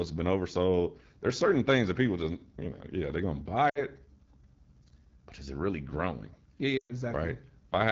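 The whole clip runs through the AMR wideband (HD Voice) codec, and it's plainly rough and raspy throughout. That grainy edge is the speech model running short of bits, which fits one of the lowest rates, around 8.85 kbit/s, with a noise-filled top band.

Lost AMR speech frames show up twice. Just after "yeah they're going to", from 3.69 to 3.83 s, about 60 ms drops out. The decoder stretches the last good sound and fades it. A longer 120 ms gap at 6.77 to 6.93 s smears and dies away to near silence.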